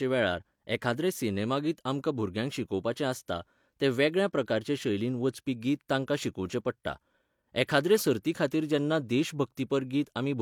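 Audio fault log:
No faults are present in this recording; the signal holds steady level and continuity with no dropouts, clipping or other defects audible at any point.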